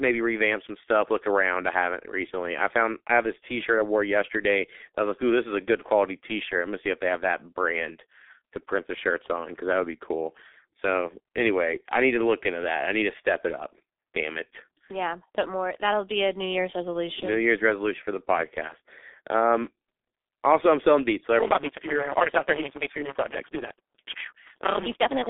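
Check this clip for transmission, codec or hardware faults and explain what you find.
The speech passes through the G.723.1 codec for the whole clip. Energy is confined to roughly 250 Hz to 3.6 kHz, with nothing above 3.8 kHz, and the coding damage is heavy. The slow, low-rate voice model, which fits about 6.3 kbit/s, muffles the speech, makes it hoarse and smears consonants. A spectrogram shows a hard ceiling and blurred, blocky frames.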